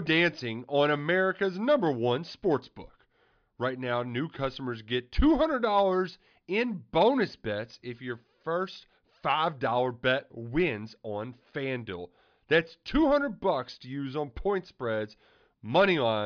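Nothing goes wrong anywhere in this speech recording, so there's no technical fault to point to at any moment.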